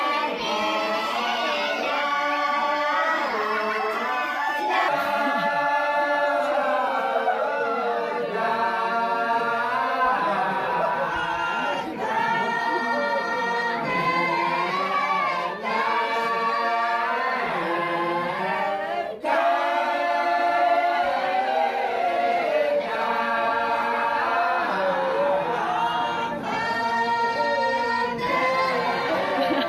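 The opening stretch of the audio was likely played back against the wrong clock, running about 1.27 times faster than it was recorded, giving a section at the wrong speed from 0 to 4.88 s. Because speed and pitch move together here, everything in that span sounds hurried and raised by roughly four semitones, so it comes across as high before the audio drops back to its true pace and pitch at 4.88 s.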